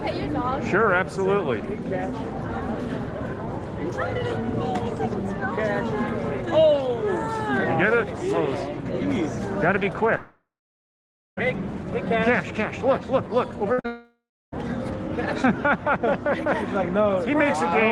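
From 10.17 to 11.39 s there is a long network dropout. The sound is held on as a buzz or hiss that dies away, then about 0.9 s of silence follows, and roughly 1.2 s of audio is lost. On a spectrogram this shows as smeared, fading bands and then an empty gap, most likely caused by the connection stalling.

At 13.73 to 13.80 s a burst of packet loss removes about 60 ms. The receiver holds the last sound and turns it down, which draws a short, fading stretch of held sound. In the waveform the envelope shrinks before the audio resumes further on.

Straight after it, at 13.80 to 13.86 s, a short concealed packet loss fills a 40 ms hole with continued sound and blends it back in. It is heard as a brief smear or wobble. On a spectrogram it is a blurred sliver with soft edges.

From 13.86 to 14.54 s a second long network dropout follows, likely from the link failing again. It carries on the faded tail, then leaves about 0.3 s of silence, and roughly 0.66 s of audio is missing. 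This appears as a blank band in the spectrogram and a flat line in the waveform before the sound returns.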